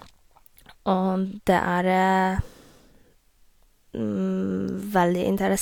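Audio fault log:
No audible faults detected.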